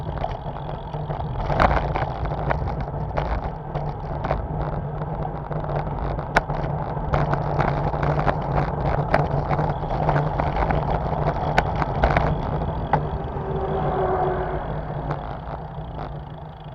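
A call bitrate drop runs from 7.62 to 12.27 s: the bandwidth estimate collapsed and the encoder was starved of bits, falling from what sounds like a full-rate stream of roughly 128 kbps to around 21 kbps. For about 2.6 s the audio turns coarse and muffled, its high frequencies trimmed away, before detail returns.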